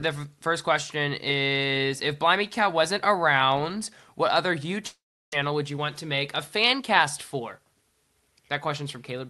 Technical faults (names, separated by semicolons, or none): long network dropout; jitter buffer speed-up